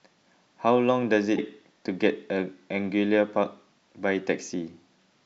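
At 1.35 s, lasting about 44 ms until 1.39 s, the speech is broken by a short glitch from damaged data in the compressed stream. The decoder misread corrupted frames, lost sync and resumed at the next good header.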